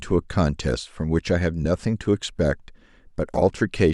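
This is a speech clip with lost LE Audio frames in two places. At 1.65 s there is a single 7.5 ms dropout, which fits one missing LC3 frame. From 3.34 to 3.42 s, about 30 ms goes missing, scattered over 75 ms in short gaps of only a few milliseconds each. In each gap the decoder repeats the last spectrum with random signs, so the sound briefly turns into a noisy smear. Light lossy compression can also be heard.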